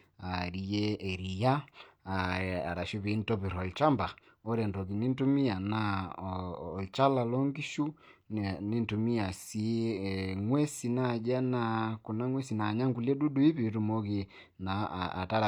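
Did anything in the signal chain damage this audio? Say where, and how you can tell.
No, nothing in the chain audibly damaged this audio.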